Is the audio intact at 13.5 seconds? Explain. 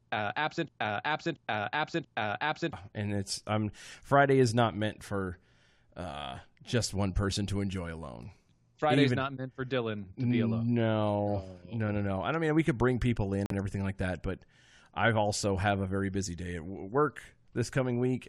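No. Audio packets likely failed to reach the Bluetooth headphones in time and were dropped. This Bluetooth dropout leaves a silent gap from 13.46 to 13.52 s, after "could bring people in". The sound then resumes mid-stream before "everything like that but", as if it had played on.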